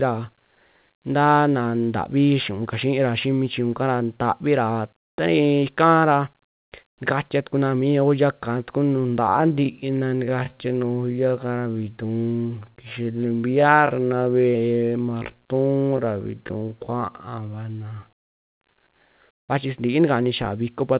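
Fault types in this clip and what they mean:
Time-stretched section: from 9.2 s to 18.5 s the speech abruptly slows to about 0.56 times its pace while the pitch stays the same. That points to software having likely lengthened this part by repeating short pieces. On a spectrogram, syllables widen and harmonic patterns repeat in short doubled blocks, all below the 4 kHz ceiling of the call path. The waveform shows drawn-out, repetitive envelopes.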